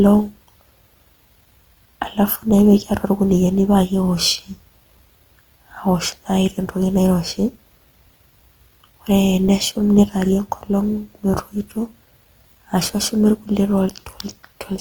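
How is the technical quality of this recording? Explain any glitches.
The recording carries plainly audible coding damage throughout. Throughout, likely Opus compression in music mode runs short of bits and fills bands with folded or noise content, leaving the speech grainy and rough while the audio still extends to about 20.2 kHz, which fits a rate near 24 kbps.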